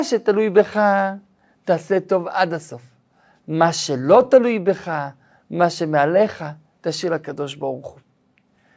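No technical faults can be heard anywhere here.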